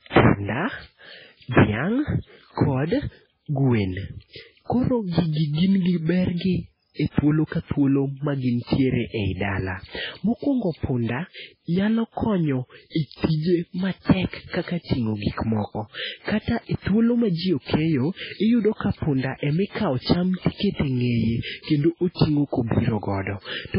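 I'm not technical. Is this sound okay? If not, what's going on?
No. From start to finish the speech sounds watery and swirly, with nothing above 5.3 kHz, which is likely heavy MP3 compression. A simple muffled filter would sound dull but not warble.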